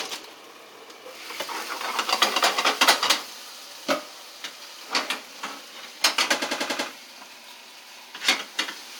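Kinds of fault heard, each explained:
repeated frames: a stutter at 6.41 to 6.88 s as one 93 ms chunk replays five extra times, from compressed frames duplicated in the stream.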